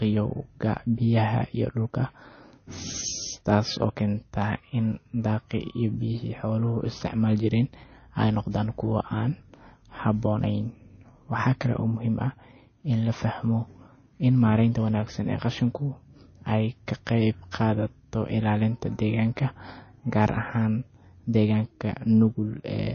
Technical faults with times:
0.00-22.94 MP3 compression

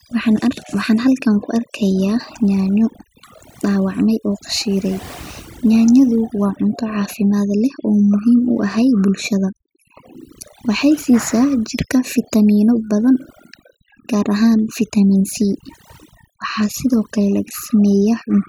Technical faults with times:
0.00-18.49 overdone noise removal

